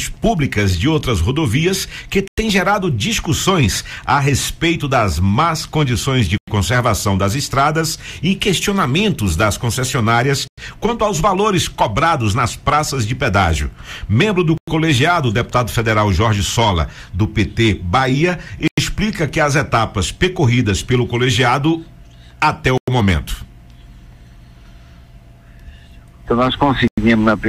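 Hard-edged 100 ms holes of silence cut the sound at 2.28, 6.38, 10.48, 14.58, 18.68, 22.78 and 26.88 s: a gap between chunks, inserted after each 4 s block.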